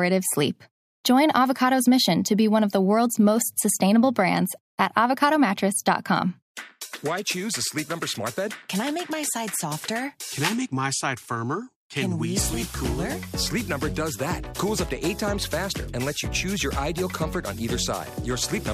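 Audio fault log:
The signal shows no technical faults at any point.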